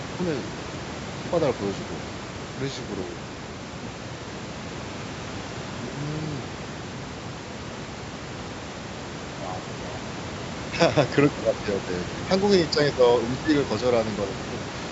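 No technical faults can be heard in this speech. The call microphone processing limits the sound to nothing above 8 kHz, and the room noise sits about 14 dB below the speech.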